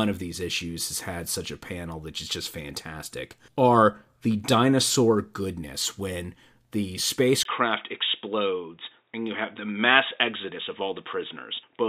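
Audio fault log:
7.43–11.89 s: input switched to a poorer device, likely, just after "dinosaur goodness when the". A 20 ms gap marks the change, then nothing above 3.8 kHz survives, so the speech turns dull and boxy, with faint new background noise well below the speech and no level jump.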